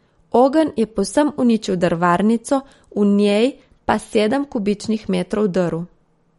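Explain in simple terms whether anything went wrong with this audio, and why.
Something did go wrong, and it runs through the whole speech clip: it sounds like likely MP3 compression squeezed too hard. Nothing comes through above about 11.2 kHz, so the top end sounds dull, and the encoder dropping quieter detail gives a watery, swirly edge, especially on s sounds.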